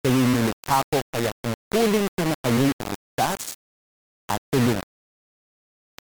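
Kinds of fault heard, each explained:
Low bit depth without dither: grainy distortion tracks the speech throughout, with error only about 10 dB below the signal, likely from plain rounding to 3 bits.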